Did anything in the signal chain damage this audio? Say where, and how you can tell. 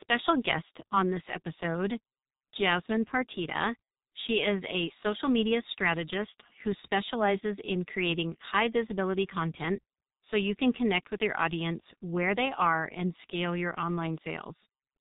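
Yes, at the codec stage: a G.723.1 codec has heavily damaged the speech throughout. Everything stops at about 3.8 kHz, so it's muffled, and consonants smear because the coarse 30 ms frames update the voice model slowly, consistent with a low-rate G.723.1 stream around 6 kbit/s.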